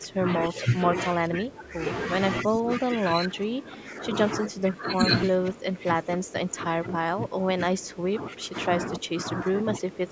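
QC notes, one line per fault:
0.0–1.83 s, 2.43–4.15 s, 4.37–5.09 s and 5.26 s to the end: speech suppressed in double talk. The voice sags by about 20 dB in the first two stretches and about 15 dB later, dulling and breaking up, likely because the echo canceller mistook it for far-end echo.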